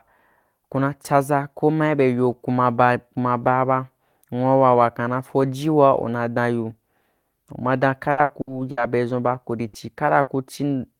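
Repeated packet loss (robotic sound) runs from 8.11 to 8.80 s in this speech clip. The stream dropped out four times within that stretch, with the longest hole about 60 ms. Each time the receiver filled the gap by extending the sound it had just played. About 240 ms of the span, roughly a third of it, is therefore concealment rather than real audio, giving a choppy texture with pieces of speech missing. Two separate bursts of packet loss follow, at 9.67 to 9.76 s and at 10.21 to 10.30 s. In each, about 60 ms of audio arrived too late or not at all, and the receiver stretched the last sound while fading it down. What should have been there is simply absent, so the speech jumps ahead after a short held buzz or fading hiss.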